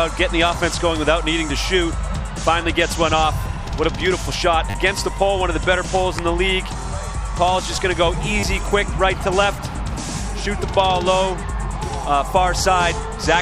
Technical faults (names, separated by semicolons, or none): repeated buffer